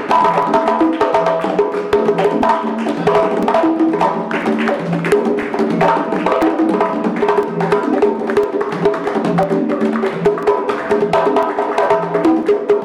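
From about 0.42 s to 12.43 s there's a tick roughly every 1.0 s, the classic periodic USB or driver dropout: something stalls the bus or driver on a fixed schedule, and each time a couple of milliseconds of audio drop to silence, so you hear a small, regular pop.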